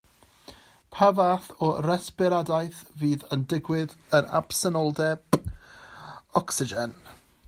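No technical faults can be heard in this recording.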